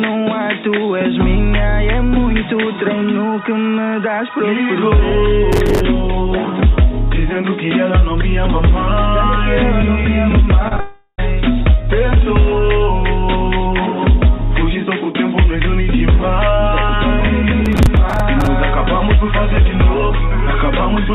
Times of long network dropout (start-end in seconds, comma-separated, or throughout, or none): 10.80-11.20